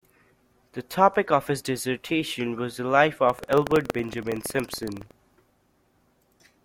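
Just after "dissertation was the life", from 3.25 s to 5.14 s, the speech takes on a rattling, robotic buzz at about 21.5 Hz: buffer tearing. The write and read positions of the playback ring buffer have drifted until they cross within each period, so a small slice of every buffer replays audio from roughly 150 ms before, with hard joins either side. The buzz rate fits a 2048-sample buffer.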